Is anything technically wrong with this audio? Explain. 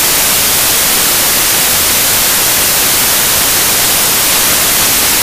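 Yes. The whole clip suffers from samples built from the wrong bytes. The reader has assembled each sample with its bytes misplaced, whether offset by one, swapped in order or misaligned, so the rapidly fluctuating low-order bits end up carrying most of each value. From start to finish this comes through as loud, harsh broadband noise.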